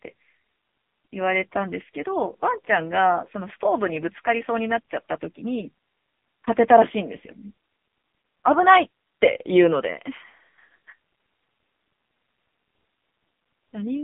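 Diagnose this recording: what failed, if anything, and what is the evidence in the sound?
The speech went through the AMR narrowband mobile codec at a low mode, heard throughout as a 200 Hz to 3.6 kHz band with nothing above 3.7 kHz and heavy buzzy, synthetic coding damage, consistent with roughly 6.7 kbps.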